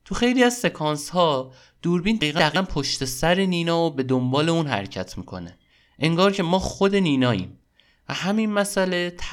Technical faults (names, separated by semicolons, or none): chunks out of order